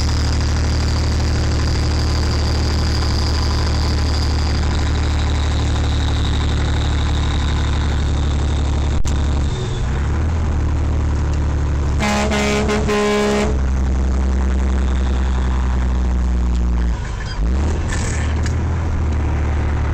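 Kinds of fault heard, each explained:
Phantom power thump: a supply switched on or off on a live input sends a step through the coupling capacitors, giving a deep thump at 8.99–9.08 s, about −12 dBFS, dying within 20 ms, lower and duller than a click.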